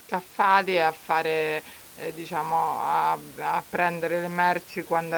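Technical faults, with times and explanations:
No technical faults are present in the signal, and the room noise sits about 22 dB below the speech as part of the original recording.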